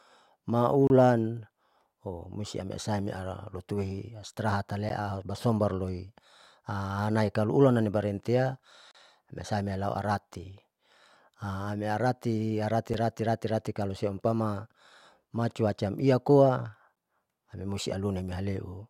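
Speech interrupted by gaps between stream segments: short, hard-edged silences at 0.87–0.90 s, 4.89 s, 8.91–8.95 s, 12.94 s and 16.95 s, about 8–34 ms each, spaced every 4 s as segment timestamps fail to meet. Unlike a dropout, nothing is lost; following sound simply resumes later.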